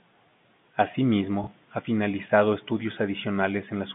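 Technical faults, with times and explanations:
1.44–1.47 s, packet loss with last packet repeated: a brief blip before "ha finalizado estudios", as one lost 30 ms packet is filled by replaying the previous one out of step with the pitch.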